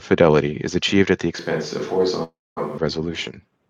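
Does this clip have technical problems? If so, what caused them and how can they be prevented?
Yes. Right after "is achieved at the", from 1.39 to 2.78 s, the close microphone's feed was likely lost and a more distant microphone took over. The voice abruptly turns roomy and thin in the bass, drops by about 5 dB, and carries room noise roughly 30 dB below the speech. Monitoring the close microphone and keeping a backup feed would prevent this switch to a distant microphone.

From 2.23 to 2.58 s, a long network dropout likely stopped packets from arriving for 0.34 s. The receiver stretched the last sound into a fading buzz and then left 0.23 s of silence, and speech resumed without the missing portion. A more robust connection with larger jitter buffering and forward error correction would prevent it.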